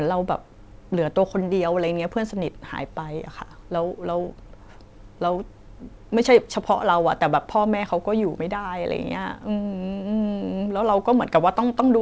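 Speech over a call path with nothing audible above 8 kHz, which fits a wideband codec such as G.722 at 64 kbps, and no faults to report.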